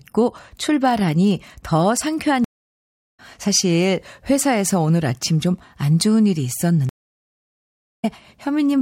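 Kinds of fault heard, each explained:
Stream reconnect: the connection dropped and a fresh decoder started mid-stream, so the speech falls silent twice, for 0.69 s at 2.44 s and 1.1 s at 6.89 s, resuming roughly 0.7 s and 0.15 s later. Waveform and spectrogram show blank gaps that end in a fade-in.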